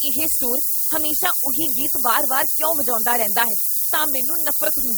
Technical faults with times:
0.00-4.97 low bit depth with noise shaping
0.00-4.97 overlap-add ripple

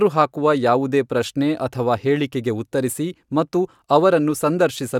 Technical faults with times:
none

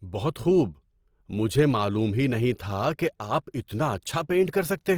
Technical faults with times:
0.00-4.97 Opus compression

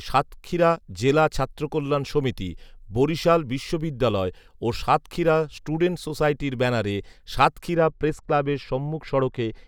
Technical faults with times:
7.74-9.68 de-emphasis applied wrongly

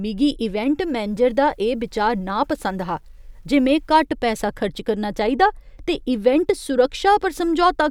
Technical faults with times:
1.08-3.91 low bit depth without dither

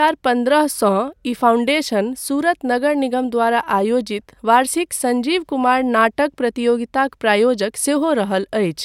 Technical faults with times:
none

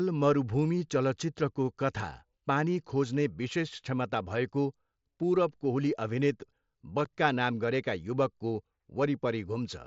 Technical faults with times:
7.05 unconcealed Bluetooth headset packet loss

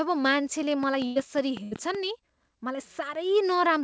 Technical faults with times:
0.83-1.96 train of clicks
1.06-1.18 burst of packet loss
1.64-1.73 burst of packet loss

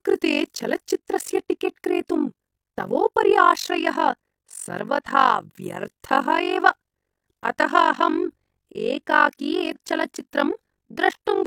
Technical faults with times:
0.00-11.47 overlap-add ripple
9.71-9.77 compressed frames skipped

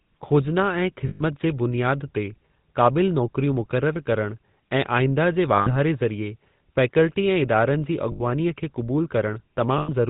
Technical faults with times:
0.00-10.10 GSM full-rate codec
1.08-1.23 lost GSM frames
5.56-5.70 lost GSM frames
8.12-8.21 lost GSM frames
9.78-9.89 lost GSM frames

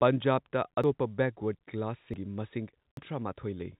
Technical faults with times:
0.84 dropped buffer (overrun)
2.14 dropped buffer (overrun)
2.97 dropped buffer (overrun)

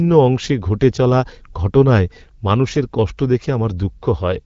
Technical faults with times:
none

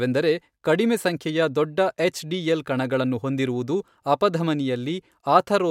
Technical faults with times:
none

